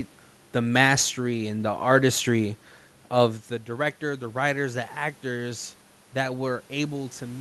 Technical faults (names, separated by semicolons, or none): sample clock jitter